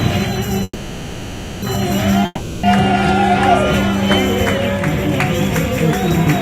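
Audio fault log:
0.63–1.64 s, call audio freeze: the sound stops advancing and its last moment is stretched into a fading buzz-like hiss lasting about a second, thinning to near silence just before it recovers. That pattern is likely a jitter buffer running dry while packets were held up in transit. When they arrive, playback picks up exactly where it stopped, so nothing is lost, but everything afterwards plays about 0.99 s later than it should.
2.25–2.65 s, long network dropout: the sound again decays into a fading hiss-like continuation of what came just before, with a brief silent stretch, for roughly 0.4 s. This time the audio resumes further along rather than where it broke off, so about 0.38 s of material is simply gone, which points to packets that likely never arrived and were concealed with synthesized fill instead of being waited for.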